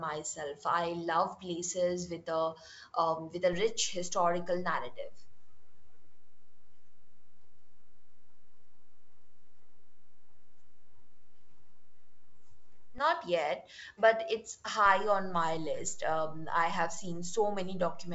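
At 3.53 s a DC step shifts the waveform's zero line off centre, and the offset holds until 12.98 s, when it drops back. Each transition is a sudden displacement of the baseline, heard as a low thump or click while the speech carries on unchanged. On the waveform the whole trace sits raised or lowered between those points. A spectrogram shows a brief broadband mark at each edge. The wideband telephone band, which cuts off near 7.7 kHz, is unaffected.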